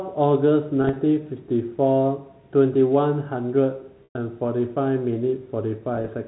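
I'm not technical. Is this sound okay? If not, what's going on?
No. The audio has packet loss with pitch repetition in three places. Around 0.82 to 0.96 s and again at 5.94 to 6.08 s, small pieces drop out in a scattered run. Each time, the receiver repeats the last bit of sound, so it seems briefly held or buzzy. At 4.04 to 4.15 s about 110 ms goes missing in one stretch, long enough for the repeat to fade toward silence before the sound returns.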